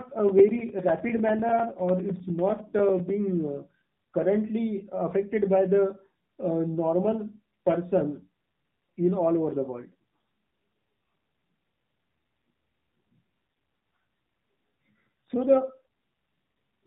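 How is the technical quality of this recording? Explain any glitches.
Technical quality is limited: the whole recording has gone through a narrowband mobile codec, and two brief bursts of corrupted frames occur.

The AMR narrowband mobile codec runs throughout. Nothing above 4 kHz survives, and the low-rate vocal-tract model, consistent with the 7.4 kbps mode, makes the speech plainly buzzy and synthetic.

AMR bit errors occur at 1.49–1.64 s and 8.10–8.17 s. Flipped low-priority bits, a few percent, misplace excitation pulses, so the speech turns hoarse and gargly while keeping its pitch.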